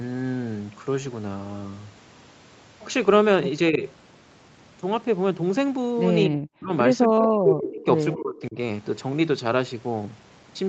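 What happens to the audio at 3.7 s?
From 3.7 to 3.82 s the speech briefly dips by roughly 10 dB, likely speech suppressed in double talk: the echo canceller mistook the talker for loudspeaker echo and turned it down. The waveform shows a short trough, and the spectrogram fades there.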